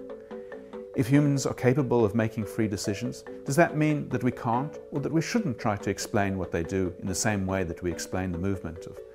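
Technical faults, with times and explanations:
No technical faults detected anywhere in the clip.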